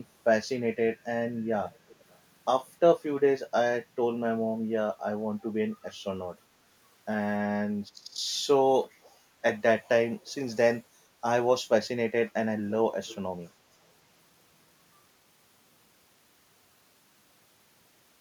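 A speech clip with an echo leak: a delayed copy of the speech, about 0.3 s late, is heard from 1.73 to 2.19 s very faintly and again from 13.07 to 13.15 s somewhat louder. It is likely leftover loudspeaker pickup that an echo canceller missed. Unlike room reverberation, it is a distinct late repeat rather than a smooth decay.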